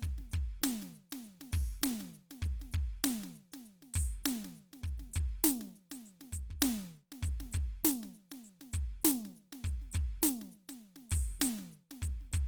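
The music appears to have been squeezed through a low-bitrate encoder, with the damage likely coming from Opus compression in its music mode. Lacking bits for detail, the codec keeps each band's overall energy but fills it with folded or noise-like content, so sustained tones across the whole clip sound grainy, rough and hissy rather than clean. Bandwidth is not narrowed, with content reaching about 20.2 kHz, and the coarseness fits a rate around 24 kbps.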